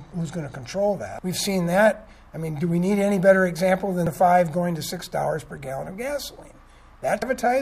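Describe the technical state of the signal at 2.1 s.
At 2.1 s the signal is intact, with no audible fault at that moment.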